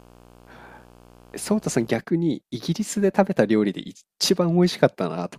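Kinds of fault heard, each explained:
Video or display buzz, 0.0 to 2.0 s: a screen or video cable couples into the audio, leaving a 60 Hz buzz with hash above it, roughly 30 dB under the speech.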